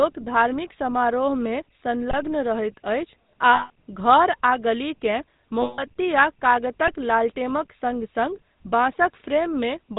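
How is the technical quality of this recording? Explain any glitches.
Quality is limited by plainly audible telephone-codec coding, with two brief dropouts.

GSM full-rate codec, throughout: the vocal tract is modelled and driven by sparse, regularly spaced pulses, consistent with the 13 kbps full-rate coder. Nothing above 4 kHz survives, and the speech carries a plainly audible buzzy, gravelly roughness.

Lost GSM frames, at 3.54–3.70 s and 5.62–5.88 s: each gap loses about 160 ms, which fits eight 20 ms frames. The decoder repeats the last good frame, so the sound briefly freezes into a rough, metallic ring before the speech resumes.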